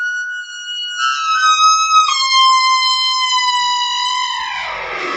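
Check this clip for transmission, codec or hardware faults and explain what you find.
Two faults stem from one processing error, with the audio band ending at 8 kHz as the call path carries it.

Noise suppressor applied to music or sounds, throughout: a suppressor tuned for speech stayed active and treats sustained tones and ambience as noise, pulling them down. Levels swing by around 5 dB, so steady parts pump and tails thin while sharp onsets pass.

Sound cut by the noise suppressor, 0.33 to 0.68 s: here the suppressor misclassified the sound as noise and attenuated it harder than elsewhere, with the deepest drop about 8 dB. The sustained or decaying portion sinks in level or its fade is cut short.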